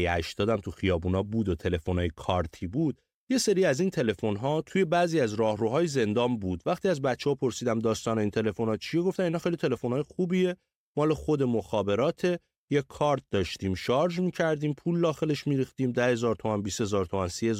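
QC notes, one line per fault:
No faults heard.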